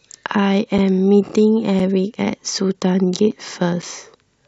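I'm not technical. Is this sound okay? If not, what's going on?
No, not quite. There's a gap between chunks: the speech arrives in half-second pieces, and a tiny silence, about 6.5 milliseconds, sits at each join. You hear brief dropouts at 0.27, 0.78, 1.29, 1.79, 2.30, 2.81, 3.31 and 3.82 seconds.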